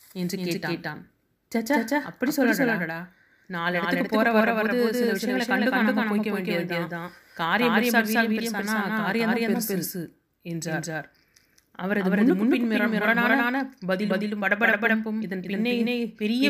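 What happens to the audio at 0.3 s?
At 0.3 s the speech is heard twice: a doubled audio track runs through the whole clip, with a second full-band copy trailing by roughly 200 ms at about equal level, dry and without decay, likely from a second, slower capture path.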